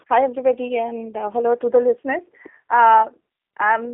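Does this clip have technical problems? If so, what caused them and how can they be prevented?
Yes. Throughout, the speech has G.729 codec damage, which fits an 8 kbit/s G.729A link. The voice is rebuilt from a filter and a few pulses, so it sounds rough and synthetic, with nothing above 3.8 kHz. Simple telephone band-limiting would sound dull but not synthetic. Using a wideband codec such as Opus prevents this.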